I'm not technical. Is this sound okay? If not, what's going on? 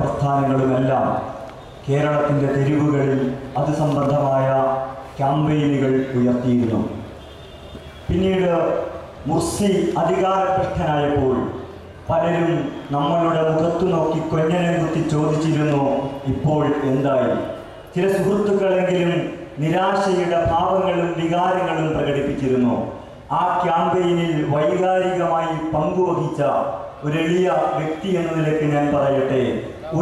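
Yes, nothing wrong turns up anywhere in this recording, so there's nothing to fix.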